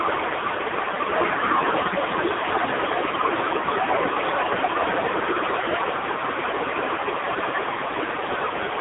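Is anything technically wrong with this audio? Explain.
Yes, heavy AMR narrowband mobile codec damage runs throughout. The speech is cut to a 300 Hz–3.7 kHz phone band with nothing above 3.8 kHz, and the buzzy, synthetic timbre fits a low AMR-NB rate near 6 kbps.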